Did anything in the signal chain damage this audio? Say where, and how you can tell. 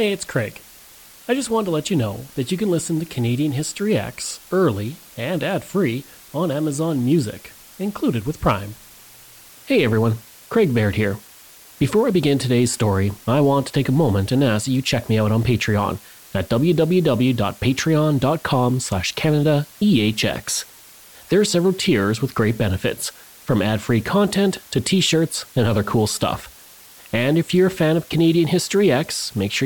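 Yes, at the sample-format conversion stage: low bit depth with dither runs through the whole speech clip. A constant, even hiss sits roughly 25 dB below the speech, and the speech carries no harshness or distortion. That fits a requantisation to 7 bits with dither added before rounding, which turns the rounding error into steady white noise. A spectrogram shows a flat noise floor across all frequencies, present between phrases, and the waveform shows a fuzzy band around zero.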